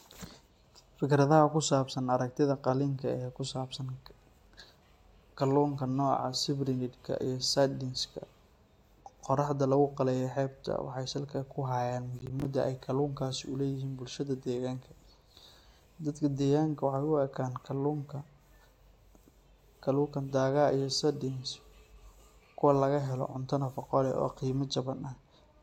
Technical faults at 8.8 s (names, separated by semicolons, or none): none